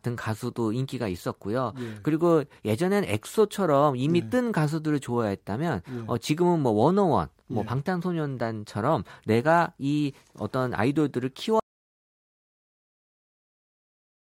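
At 11.6 s the speech cuts off mid-flow and the clip runs on in complete silence to its end, a stretch of about 2.7 s with no room tone at all, so whatever followed is simply gone. This is an audio dropout to silence, most likely the input being lost through a disconnected device, a failed link or an accidental mute while the recorder kept writing empty signal.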